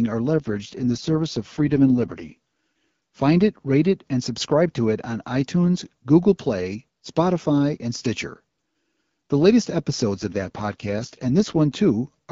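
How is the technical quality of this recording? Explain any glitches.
The call runs over AMR-WB at what sounds like 12.65 kbit/s with only light codec wear, but there are two glitches: AMR rate drops from 0.34 to 2.34 s and from 10.15 to 11.6 s. A weak radio link pushes the codec down to a lower mode, and the roughness is consistent with about 6.6 kbit/s, with the freed bits spent on error protection. The bandwidth holds and nothing cuts out, but the voice turns raspy and synthetic until the rate steps back up.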